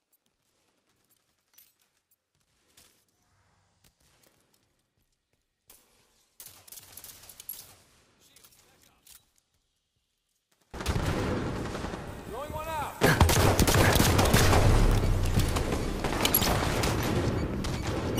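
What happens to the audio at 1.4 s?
At 1.4 s the sound is heavily cancelled: from 0.0 to 10.74 s it drops by about 26 dB. The likely cause is one channel inverted, so content common to both stereo channels cancels when summed to mono, leaving only their faint difference.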